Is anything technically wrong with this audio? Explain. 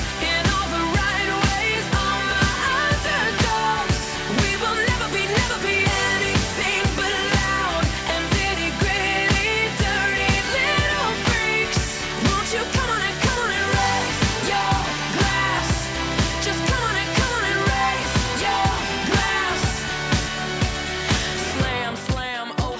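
No, nothing here is technically wrong: the audio shows the normal marks of call microphone processing, with the lowest bass trimmed by its high-pass filter and nothing above 8 kHz, as expected for that path.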